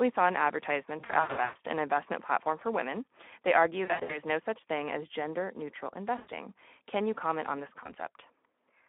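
Throughout the speech runs through the Speex codec, confined to a narrow line band of roughly 250 Hz to 3.5 kHz. The hoarse, noisy grain on every syllable points to a low-to-middle Speex setting near 11 kbps, where the CELP excitation is starved of bits. Unlike a plain band-limited phone line, which is thin but clean, this damage sits inside the voice as roughness rather than only as missing treble.

VoIP packet loss concealed by the speech codec breaks in four times. The worst stretch runs from 0.99 to 1.56 s, with about 380 ms lost in bursts of up to 120 ms. Shorter stretches follow at 3.85 to 4.20 s and at 6.17 to 6.31 s, and a single 20 ms loss falls at 7.83 s. Rather than silence or clicks, the decoder repeats its last pitch and filter with falling gain, so each gap turns into a buzzy, fading smear. The voice stays weak for a moment after the packets return, which sets this apart from a simple dropout.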